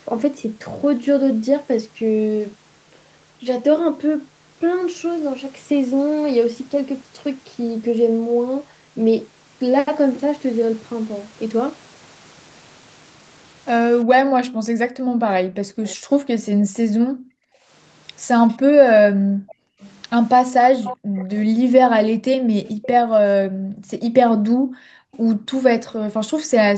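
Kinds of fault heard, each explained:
Background gated by the echo canceller: from 14.05 s to the end, the room sound dips and drops out, by up to about 40 dB, whenever the far side's loudspeaker is active. Unlike an echo, nothing extra is added; the canceller simply clamps the microphone and ambience vanishes.
Echo leak: a faint delayed copy of the speech returns, likely from a loudspeaker whose echo canceller let some through. It appears at 15.86 to 16.69 s, about 25 dB down and 384 ms late, then 18.49 to 25.92 s, louder at about 15 dB down and 454 ms late.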